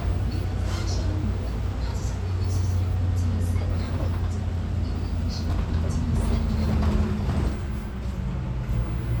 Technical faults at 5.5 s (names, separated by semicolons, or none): chunks out of order